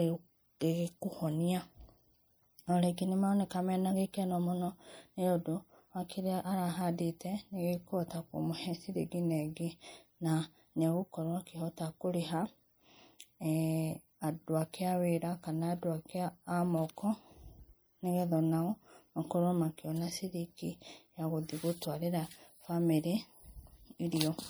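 From start to finish the speech has a watery, swirling quality, with the sibilants turning metallic and chirpy, and consonant attacks smeared. This is likely MP3 compression at a low bitrate, around 64 kbps judging by the damage: short of bits, the encoder drops quiet spectral lines, which then flicker in and out from frame to frame.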